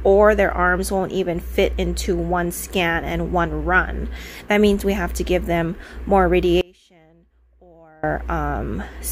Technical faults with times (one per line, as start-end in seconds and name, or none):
6.61-8.03 audio dropout to a faint residue